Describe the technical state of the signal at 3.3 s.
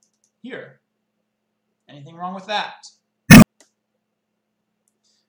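Damaged data in the compressed stream corrupts frames from 3.25 to 3.43 s. The decoder loses sync, giving a brief glitch and adding 39.5 ms of time.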